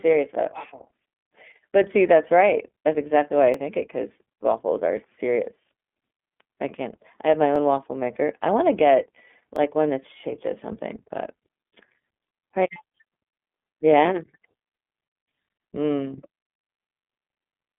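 Speech heard through an iLBC codec: the band stops near 3.8 kHz, with the line running roughly 200 Hz to 3.5 kHz, and the voice has a rough, synthetic grain that a clean G.711 line lacks. The 30 ms framing fits iLBC's 13.33 kbps mode. Overlapping chunks also produce a brief stutter-click every 2.0 s, at 1.54, 3.54, 5.55, 7.56, 9.56, 11.57 and 13.58 s. Each new chunk starts about 6.5 ms before the last one ended, so that sliver plays twice. A repeat rather than a gap or dropout sets it apart from missing chunks.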